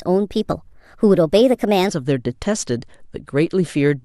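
From the start to 1.89 s, the speech plays as a section at the wrong speed. It runs about 1.21 times too fast. Pitch rises with it, by roughly three semitones. Voices sound high, thin and hurried. Syllables crowd together. At 1.89 s the sound drops abruptly to its natural pitch and pace. The likely cause is that this stretch was played or edited against the wrong clock rate.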